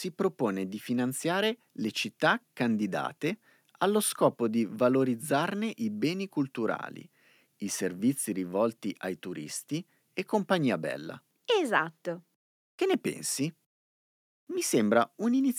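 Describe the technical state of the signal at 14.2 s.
At 14.2 s the speech signal is intact, with no technical fault present at that moment.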